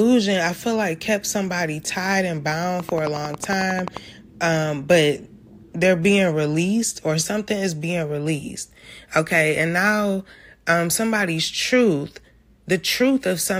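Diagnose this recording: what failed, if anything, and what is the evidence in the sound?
Right after "kept somebody tied and", from 2.80 to 3.98 s, there's a train of clicks: a dozen or more near-identical ticks at a steady 11.1 per second, peaking about 10 dB above the speech, and they carry on until "um but they're being" picks up. The even spacing and the matching shape of each pulse suggest the fault is most likely in the analogue wiring, a faulty connection or power supply, with nearby equipment coupling a repeating spike into the signal path.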